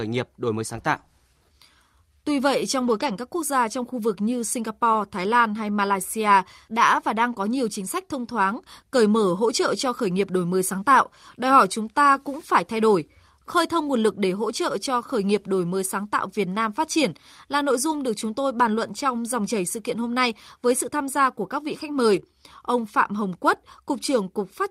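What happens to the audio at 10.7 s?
At 10.73 to 10.75 s, a lost packet is rebuilt from error correction: the next packet's low-bitrate copy fills 20 ms, sounding briefly rougher, with no waveform gap and a short, noisier spectrogram smear.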